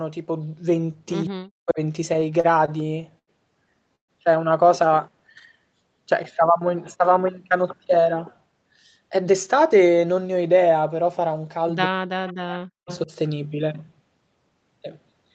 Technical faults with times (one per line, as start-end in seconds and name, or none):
1.29-1.79 speech suppressed in double talk
2.13-3.29 repeated stalls (stutter)
3.95-4.10 call audio freeze
9.12-9.95 jitter buffer speed-up
11.87-13.11 speech suppressed in double talk
12.27-12.33 echo leak
12.87-12.98 echo leak